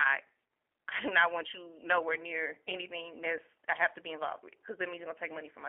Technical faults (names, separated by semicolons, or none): G.729 codec